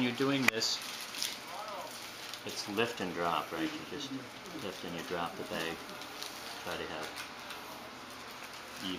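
No technical faults occur at any point in the clip, so there is nothing to describe in time order.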